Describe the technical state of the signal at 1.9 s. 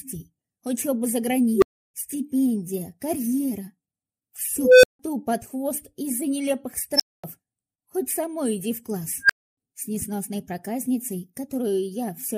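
An unstable filter runs from 1.54 to 1.94 s, so 1.9 s falls near its end. A recursive filter has been driven past its stability limit, and its output feeds on itself: a tone of around 400 Hz swells to clipping within about 76 ms, then the arithmetic overflows and the sound collapses into a silence of about 320 ms while the filter resets. It is heard as a sharply rising squeal that cuts out abruptly.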